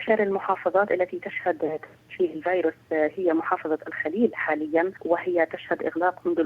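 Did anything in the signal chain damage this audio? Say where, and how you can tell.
No, nothing along the chain has left an audible mark on this audio that would point to damage at any stage.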